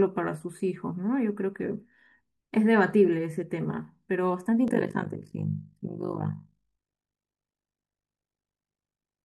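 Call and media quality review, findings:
Overlap-add ripple, 4.68 s to end (9.24 s). Speech takes on a rough flutter, level pumping about 60 dB deep at around 50 Hz. Probable component: frame-based processing stage. Analysis windows are resynthesised with an overlap that doesn't sum to constant gain, so level dips once per frame.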